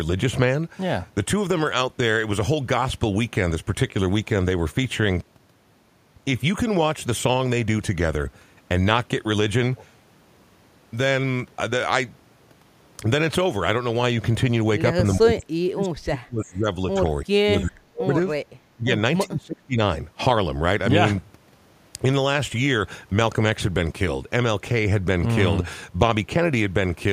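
Speech suppressed in double talk runs from 15.15 to 19.79 s: deep cuts of about 35 dB at 15.15–16.67 and 17.23–18.13 s, smaller ones at 18.75–18.91 and 19.24–19.79 s, a slight dip at 16.93–17.01 s and a moderate one at 18.48–18.57 s. The speech drops out in pieces, likely because an echo canceller mistook overlapping talk for echo.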